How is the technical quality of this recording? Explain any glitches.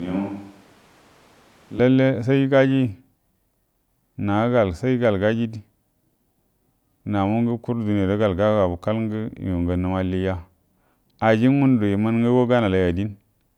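The recording has one clear glitch, at the very start. From 0 to 1.79 s there is a switch to a distant microphone. The speech is already roomy and hollow when the clip begins, with thin bass. It sits about 5 dB quieter. Background noise is more exposed, roughly 25 dB under the speech. The likely cause is that the close microphone's signal was missing, so a farther microphone covered that stretch. At 1.79 s the sound jumps back to a close, full tone.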